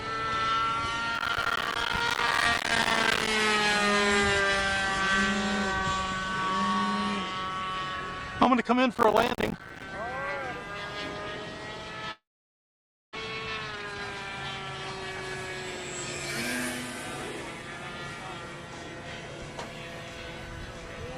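From 1.15 to 3.27 s, and again from 8.95 to 9.82 s, processor overload crackle appears. The processor misses the deadline for one small buffer after another, and each missed buffer is left as a short hole of silence. The hundreds of hard-edged gaps in the first stretch and the dozens in the second are heard as gritty crackle on the sound, in a pattern that fits buffers of about 5 ms.

At 12.11 s the audio stops short. The last sound carries on briefly and fades, then about 0.92 s of silence follows until 13.17 s. This is likely a long network dropout. About 0.6 s of audio is simply gone when the sound resumes.

From 13.72 to 13.96 s a jitter buffer speed-up follows. Delay has piled up in the receiver's buffer, so it repeatedly cuts pitch-period-sized pieces to catch up, removing roughly 0.3 s. The audio runs at about 203% speed at unchanged pitch and sounds rushed.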